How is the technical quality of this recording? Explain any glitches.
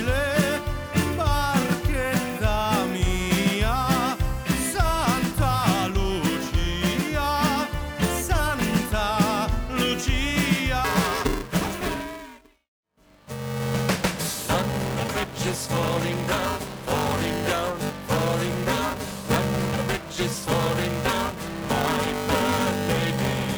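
Technical quality drops partway through. Buffer tearing starts at 10.84 s and lasts to the end. Playback and writing have slipped out of step. Part of each buffer repeats audio a few milliseconds old, with hard joins. The result is a robotic 345 Hz buzz, which fits a 128-sample buffer.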